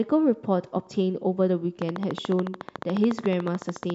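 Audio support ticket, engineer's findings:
Train of clicks, 1.82 s to end of clip (3.95 s). Regular ticking at 13.9 clicks/s, around thirty similar pulses, peaks roughly 10 dB above the speech, audible through pauses. Likely external interference or a faulty connection or power supply injecting repeated pulses.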